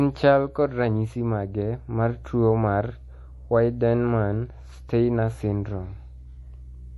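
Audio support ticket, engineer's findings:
Watery, swirly texture across the whole speech clip, start to finish. Hard treble ceiling, nothing above 11.5 kHz. Sibilants metallic, attacks smeared. Likely MP3 compression, encoder starved for bits, so it chops the top band at a fixed point and drops weak frequency lines that flicker frame to frame. Damage plainly audible, which fits a low bitrate around 48 kbps.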